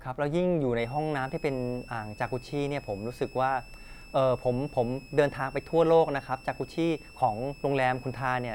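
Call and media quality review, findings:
High whistle under the speech, 0.79 s to end; pitch wanders between 2.5 and 2.7 kHz, roughly 25 dB below speech. Switching supply whistle: power supply in audible burst mode or beating with another supply, frequency shifting with load, coupling into audio path.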